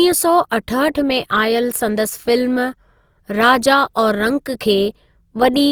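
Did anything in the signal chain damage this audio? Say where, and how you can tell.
Yes. Opus compression runs throughout the clip, and the damage is plainly audible. The speech sounds grainy and rough, and its tonal parts are smeared into a noisy texture rather than the swirling, hollow sound of MP3. Bandwidth stays full, with content reaching about 20.2 kHz. This pattern is likely the codec stage running Opus in its CELT music mode at a low bitrate, around 24 kbps. Short of bits, it fills bands with folded or noise-like energy.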